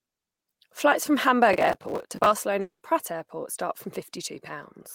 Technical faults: processor overload crackle; long network dropout; jitter buffer slow-down; jitter buffer speed-up

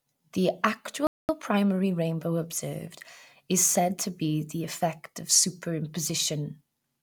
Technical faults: playback stall

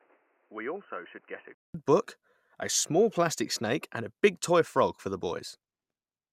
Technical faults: input switched to a poorer device

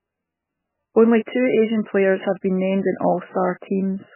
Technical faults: MP3 compression

